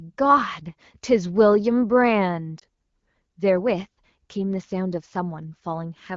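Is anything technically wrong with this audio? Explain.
Yes. From 2.59 to 2.64 s there are lost AMR speech frames, consistent with a single dropped 20 ms frame. The decoder conceals it by repeating the previous frame's pitch and vocal tract settings at reduced gain, which produces a brief dip or warble in the wideband speech.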